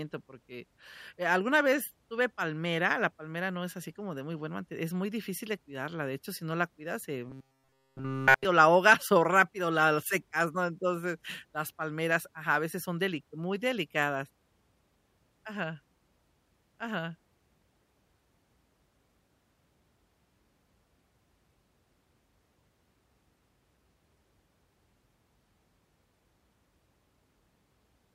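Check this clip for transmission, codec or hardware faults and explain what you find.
One fault is present. From 7.29 to 8.45 s there is robotic sound from repeated short buffers. The speech becomes a rigid metallic buzz near 133 Hz throughout. Likely cause: audio arriving too seldom, so a segment of roughly 7.5 ms is replayed in a loop while the real audio is skipped.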